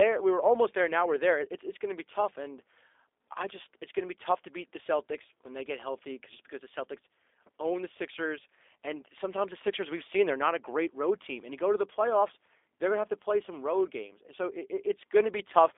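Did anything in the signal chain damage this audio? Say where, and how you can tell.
Yes, the codec stage, and it's there for the whole clip. This speech has been through G.729, and the roughness fits the 8 kbit/s of the G.729A variant. Everything above about 3.7 kHz is gone, with the band sitting roughly 300 Hz to 3.6 kHz like a phone line. The voice has that slightly buzzy, synthetic edge because the codec rebuilds it from a vocal tract model, a pitch predictor and a few pulses per frame instead of the real waveform.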